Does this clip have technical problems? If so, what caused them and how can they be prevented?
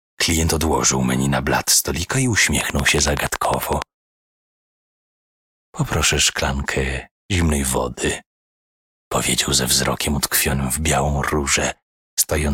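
Yes. A train of clicks, about fifteen regular pulses at 10.7 per second, runs 2.61–3.83 s, likely equipment interference. Reroute cables away from nearby electronics.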